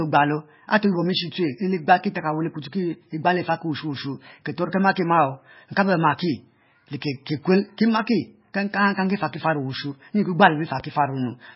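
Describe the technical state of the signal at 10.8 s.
A sudden voltage step or pulse, likely from a plug, switch, static discharge or driver glitch, entered the signal path between 10.80 and 10.82 s. The circuitry downstream shaped it into one short, sharp loud pop that stands around 5 dB above the surrounding speech for about 24 ms. The speech carries on underneath it without a break, so the pop sits on top of the sound rather than replacing it.

At the same moment, the MP3 compression that runs through the whole clip is still in effect. The encoder was starved of bits, likely at a very low bitrate that fits roughly 18 kbps. With so few bits, it discarded weaker frequency lines that then flicker on and off from frame to frame, and it removed everything above 5.6 kHz. The result is heavy damage: a dull, watery, swirling quality with smeared consonant attacks, audible around the pop as well.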